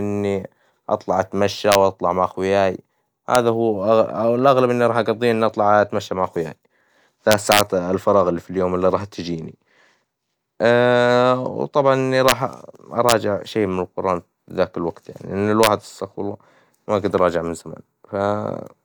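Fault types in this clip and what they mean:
Integer overflow: peaks in the speech exceed the largest value the integer format can hold and wrap to the opposite sign instead of being limited, so the waveform jumps across its full range. With only about 0 to 1 dB of overdrive, loud syllables crack violently and more sharply than clipping would, at 1.72–1.75 s, 3.35 s, 7.32–7.61 s, 12.29–12.32 s, 13.09–13.12 s and 15.63–15.67 s.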